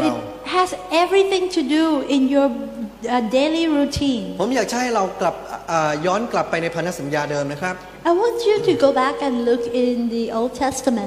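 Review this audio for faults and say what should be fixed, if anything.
Nothing here needs fixing; I didn't hear any faults anywhere in the audio, so it can stay just as it is.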